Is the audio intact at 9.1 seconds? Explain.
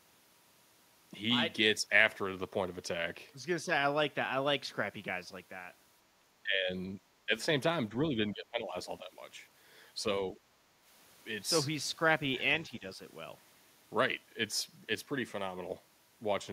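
No, 9.1 s falls at the tail of speech suppressed in double talk, running from 8.09 to 9.12 s. The echo canceller likely mistook overlapping talk for echo and ducked the speech by up to about 15 dB, in patches totalling roughly 0.7 s. The waveform shows a shrunken envelope, and the spectrogram shows thinned, gappy energy.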